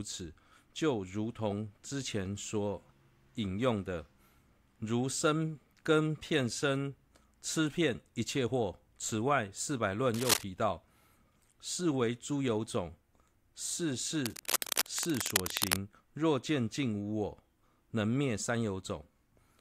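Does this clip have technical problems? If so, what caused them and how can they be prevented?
Yes. Two bursts of cable scratch noise sit over the speech, from 10.14 to 10.43 s and again, longer, from 14.20 to 15.76 s, each roughly as loud as the speech itself. They are dense, uneven scratching and rustling rather than isolated clicks or steady hiss, which sets them apart from digital dropouts or background noise. The likely cause is a worn cable, connector or control being moved so that its contact resistance jumps about. Replacing worn leads and securing cables so they cannot shift during recording prevents it.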